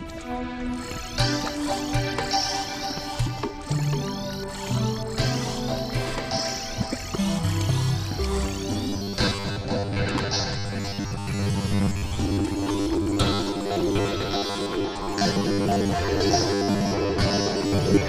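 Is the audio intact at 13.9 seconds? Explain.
No. At 13.9 s the audio sits inside a stretch of robotic sound from repeated short buffers, running from 8.72 s to the end at 18.08 s. The likely cause is new audio arriving too slowly, so a 10 ms slice is repeated to fill the gaps, with roughly half the sound replaced this way. That loop imposes a rigid, metallic 100 Hz buzz. A spectrogram shows evenly spaced horizontal bands at multiples of 100 Hz, and the waveform shows identical 10 ms blocks.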